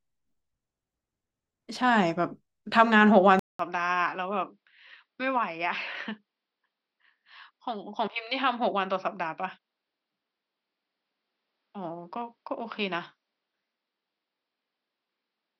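At 3.39 s the speech cuts out for 200 ms, then returns duller, about 10 dB quieter and with nothing above 5.8 kHz, most likely an input switched to a poorer device. A simple filter wouldn't bring the gap or the new faint noise floor.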